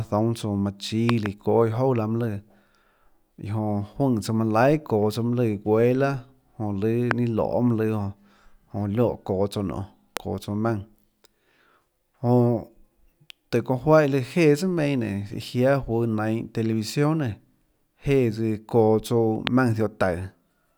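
Speech with a loud pop at 1.09 to 1.28 s (two pops), 7.11, 10.17 and 19.47 s, each spiking well above the speech, which continues beneath. Each shows as a tall waveform spike and a thin full-height spectrogram stripe, likely from electrical transients such as switching or static.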